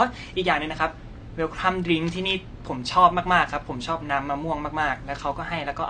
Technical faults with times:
0.00-5.90 AAC compression

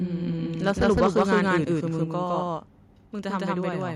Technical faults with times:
0.00-3.96 doubled audio track
0.66-1.48 microphone overload
1.04 microphone volume stepped down
2.04 microphone volume stepped down
3.06 microphone volume stepped down

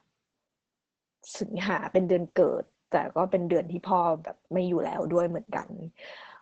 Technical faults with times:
0.00-6.41 Opus voice compression

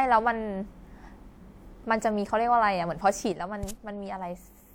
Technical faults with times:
3.32-4.75 sudden gain jump

